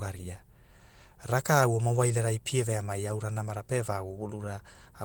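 Speech clip, no faults heard.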